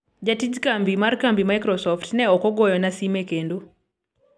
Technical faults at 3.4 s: none

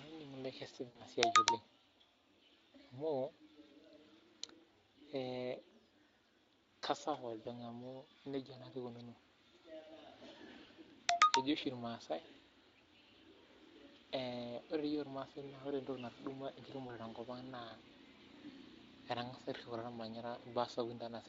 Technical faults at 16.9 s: VoIP packet loss concealed by the speech codec

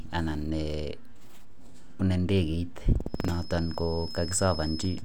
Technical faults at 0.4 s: none

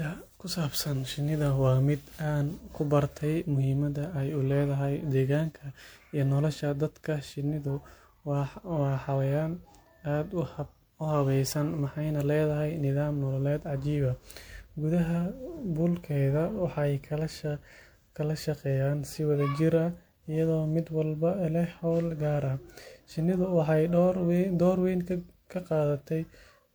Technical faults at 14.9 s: generation loss

